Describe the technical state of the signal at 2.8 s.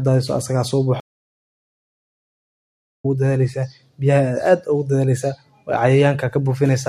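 At 2.8 s the signal is in the silent gap of a stream reconnect, spanning 1.0 to 3.06 s. The connection dropped, the player fell quiet for about 2.04 s, then restarted decoding mid-stream, so the speech resumes roughly a second and a half further on. Waveform and spectrogram show a flat, empty band until 3.06 s.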